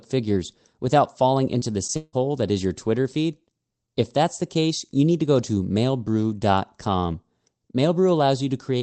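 Twice, packets of the call failed to reach the decoder in time, producing short concealed packet loss. Just after "figures without falling", at 1.59 to 1.63 s, about 20 ms of audio went missing. The receiver filled the gap by extending the preceding sound and then blending back into the real signal, which is heard as a brief smear. The same happens at 1.87 to 1.90 s, where another 20 ms gap is patched over with a short wobble.

Immediately afterwards comes a longer break, most likely a network dropout in which no audio arrived for about 160 ms. From 1.96 to 2.15 s the receiver keeps extending the last sound as a fading buzz or hiss, drops briefly to silence, and then resumes at "that is your" without the lost stretch. Through all of this the speech has the restricted, band-limited quality of a call codec cutting off above 8 kHz.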